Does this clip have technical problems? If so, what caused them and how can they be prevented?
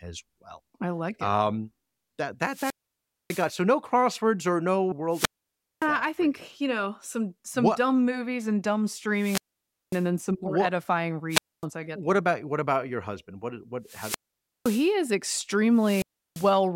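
Yes. Wireless microphone squelch dropout occurs at 2.45–3.53, 5.09–5.89, 9.14–10.08, 11.29–11.66, 13.84–14.93 and 15.71–16.60 s. Each time, hiss rises as the FM signal fades, then the receiver's squelch mutes the speech for 0.25–0.6 s before it returns. The rising hiss before each silence sets this apart from digital dropouts, which cut abruptly. Prevent it by keeping the transmitter in line of sight, checking antenna placement and battery, and choosing a clear frequency.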